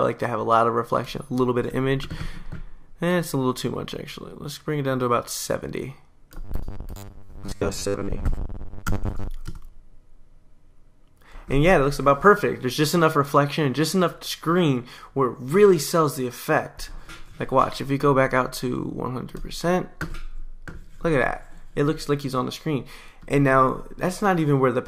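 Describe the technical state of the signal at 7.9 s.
At 7.9 s you're inside a stretch of robotic sound from repeated short buffers, running from about 6.44 to 9.28 s. Roughly half the audio is a replayed chunk, likely because fresh data arrived too slowly, which fits a 10 ms buffer. That puts a rigid, metallic 100 Hz buzz over the sound.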